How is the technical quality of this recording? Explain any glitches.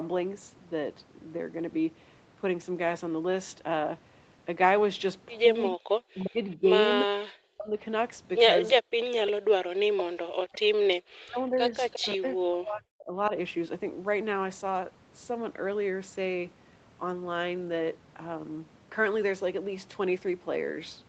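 The recording is speech carried over a call, band-limited to 8 kHz, and it is marred by two connected faults in its middle section, from about 5.6 s to 13.3 s.

Echo leak is heard at 5.64–5.70 s, 6.19–6.56 s and 11.91–12.05 s as a faint copy of the speech trailing the original by about 351 ms. It sits roughly 15 to 25 dB below the direct sound. The likely cause is a loudspeaker on one end whose echo canceller let part of the returned signal through.

Speech suppressed in double talk shows up at 5.71–6.69 s, 7.52–7.76 s, 8.75–10.70 s and 11.07–13.32 s. In these stretches the speech dips sharply, at its deepest around 40 dB, or drops out in pieces. This is likely the echo canceller mistaking overlapping talk for echo and attenuating it.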